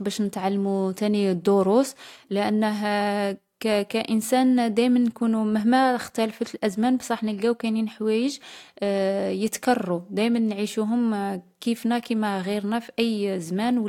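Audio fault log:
No faults found in this speech recording.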